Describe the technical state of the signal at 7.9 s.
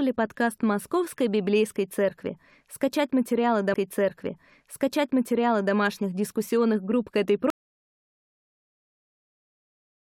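At 7.9 s you're in dead silence: an audio dropout to silence that starts at 7.50 s, right after "дискуссионных групп к этой", and runs all the way to the end of the clip. The speech is chopped off mid-phrase, and what follows isn't quiet room tone but plain silence. That points to the input signal being lost, likely a disconnect or a stray mute, while the recorder just kept writing empty samples.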